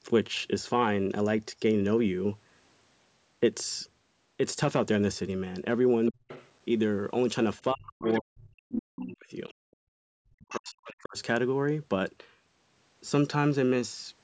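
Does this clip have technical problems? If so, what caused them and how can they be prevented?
Yes. A faint second voice, roughly 15 to 30 dB below the main talker, slips through at 6.06–6.5 s, 8.02–8.21 s, 9.49–9.53 s and 10.51–10.71 s. This is other side's voice leaking through, likely because the echo canceller left part of the loudspeaker signal in the microphone. Using a headset stops the loudspeaker from reaching the microphone.

The main talker's speech suddenly ducks by around 35 to 40 dB at 6.1–6.22 s, 7.72–9.28 s and 10.29–11.18 s. This is speech suppressed in double talk: with both sides speaking at once, the canceller likely mistook the talker for echo and turned everything down. A headset or better echo-canceller tuning for double talk prevents it.

From 9.56 to 10.01 s the room sound drops away by about 37 dB and then returns. This is background gated by the echo canceller, which clamped the microphone hard while the loudspeaker was playing. 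Gentler suppression or headset use keeps the background steady.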